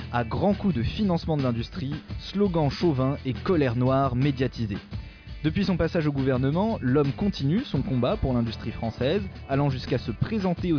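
No technical faults can be heard anywhere in the signal.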